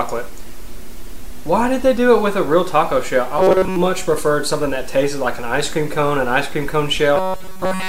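Robotic sound from repeated short buffers appears from 3.38 to 3.76 s, mostly buzz, and from 7.16 s to the end, entirely buzz. It is a rigid 188 Hz metallic tone, unlike hum because it follows the sound's rough shape, likely from looping a 5.3 ms buffer.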